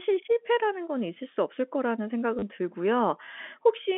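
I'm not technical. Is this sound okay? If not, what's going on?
No. At about 2.39 to 2.42 s there is a brief robotic stutter: packet loss with last packet repeated. For about 30 ms, pieces of the audio never arrived, so the receiving end replayed the last piece it had, which fits three 10 ms chunks in a row. The repeats give a quick buzzy judder. A simple dropout would sound different, because it leaves a moment of silence. The narrow, phone-line tone throughout comes from ordinary telephone coding and is not a fault.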